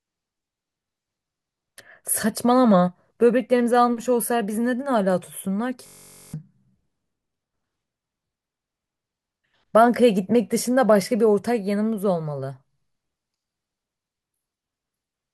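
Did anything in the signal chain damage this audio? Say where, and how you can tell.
Yes: a system hang loop at the driver buffer, 5.87–6.34 s. One 21.3 ms block repeats as a 46.9 Hz buzz, seen as identical waveform tiles and evenly spaced spectrogram harmonics.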